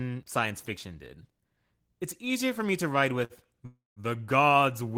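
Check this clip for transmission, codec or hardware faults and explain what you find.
Two transmission faults turn up here, both in the back half of this speech clip, and both are timing hiccups rather than lost audio.

The first is a short stall from a late packet, from 3.25 to 3.33 s, right after "for me to ride". A packet showed up late, the jitter buffer ran dry, and the receiver stretched the last bit of sound for about 51 ms until the packet arrived. Nothing's lost; you hear a held sound with a faint buzzy smear, and everything after it lands roughly 51 ms late.

The second is a call audio freeze, from 3.66 to 3.99 s. The sound hangs for about a third of a second, with roughly 307 ms of filler in total. It begins as a fading buzzy continuation of the last sound, then about 180 ms of that is flat silence before the audio resumes where it stopped. The likely cause is packets held up in transit, leaving the jitter buffer empty. 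Again, nothing's missing; a gap has just been inserted into the audio.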